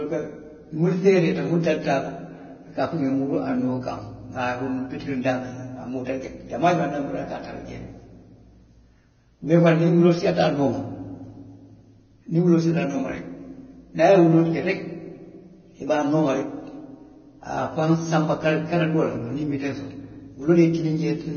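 Throughout, nothing reaches above 6.5 kHz. The treble sounds hissy and grainy. The likely cause is heavy Vorbis compression at a very low bitrate.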